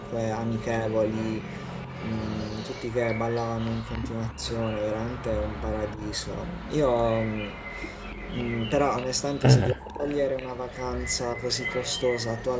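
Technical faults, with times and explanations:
Throughout: echo leak. A faint copy of the speech trails about 279 ms behind, roughly 15 dB down, likely from incomplete echo cancellation. It shows as a ghosted, offset repeat of the spectrogram's harmonics.
4.33–4.43 s, 5.96–6.01 s, 9.74–10.05 s: speech suppressed in double talk. The speech dips by about 10 dB in the first two events and by about 35 dB in the last. This is likely the canceller ducking during overlap, and it shows as waveform notches and spectrogram gaps.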